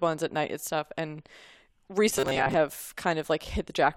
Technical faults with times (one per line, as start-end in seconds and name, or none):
2.10-2.55 robotic sound from repeated short buffers